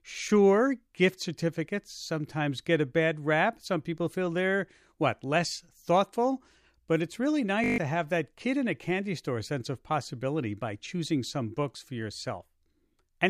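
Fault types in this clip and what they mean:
System hang loop: the system stalled while the sound hardware kept replaying one 20 ms slice of its buffer, so after "it's really" the speech turns into a steady 50 Hz buzz from 7.64 to 7.78 s, losing about 150 ms before "to have that kid".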